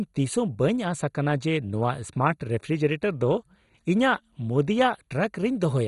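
From start to finish the speech sounds dull and gurgly, with nothing above 11.2 kHz and upper bands flickering out, likely heavy MP2 compression at around 56 kbps.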